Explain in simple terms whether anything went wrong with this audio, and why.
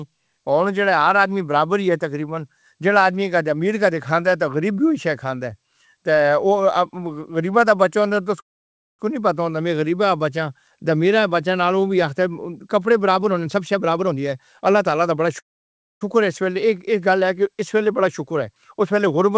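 Yes, two things went wrong. A call audio freeze, likely from delayed packets starving the buffer, causes brief near-silent pauses at 8.40–9.01 s (between "بچہ ہوندا اے تے" and "نی پتہ") and 15.39–16.03 s; afterward the speech resumes without loss. A jitter buffer speed-up then trims surplus held audio: from 13.16 to 15.26 s the speech runs about 19% faster, losing roughly 0.4 s, and from 18.02 s to the end, after "اس ویلے", about 7% faster, losing around 0.1 s, so it sounds rushed at normal pitch.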